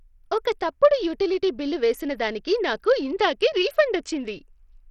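A speech clip carrying heavy Bluetooth SBC compression throughout, likely from a low-bitrate link around 64 kbps: flickering, thin treble cut above 16.5 kHz, with gritty quantisation noise riding on everything.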